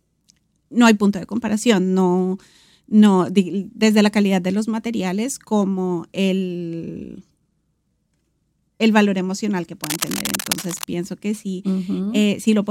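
From 9.84 to 10.87 s, cable scratch noise rasps over the speech at roughly 10 dB below it, likely from a worn cable or connector being moved. Unlike isolated clicks or steady hiss, it's a dense, irregular crackle lasting about a second.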